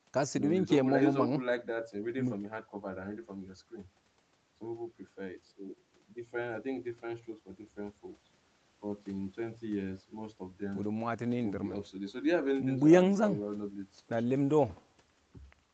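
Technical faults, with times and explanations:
No technical faults can be heard in this speech clip. It has passed through call microphone processing, so the lowest bass is trimmed and nothing reaches above 8 kHz.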